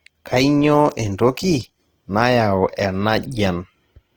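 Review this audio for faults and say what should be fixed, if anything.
Opus compression runs throughout the speech, and the damage is plainly audible. Tones come out rough, grainy and noisy rather than swirling, which sets it apart from MP3's watery holes. The band is still full, reaching about 20.4 kHz, so the encoder stayed in its music (CELT) mode. It likely ran out of bits and filled bands with folded or noise content, which fits a low rate near 16 kbps. To prevent it, encode speech at a higher Opus bitrate.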